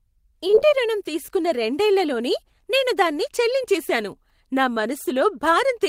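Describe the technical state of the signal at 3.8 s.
At 3.8 s the speech signal is intact, with no audible technical fault.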